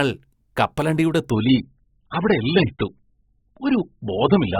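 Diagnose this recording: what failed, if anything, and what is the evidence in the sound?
The speech falls back to an adaptive stream at a lower bitrate, a network-driven switch at the codec stage. From 1.30 s to the end at 4.60 s, the treble is gone above 5 kHz and the sound turns thin and smeared, which fits a drop from a high-quality AAC stream to roughly 8 kbit/s. The player fetched cheaper segments when throughput sagged. Unlike packet loss or a buffer underrun, the quality changes abruptly with no gap or repeat.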